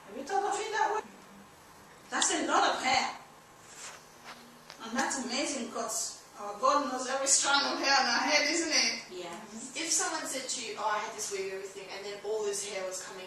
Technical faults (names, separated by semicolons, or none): skip ahead; jitter buffer speed-up; loud pop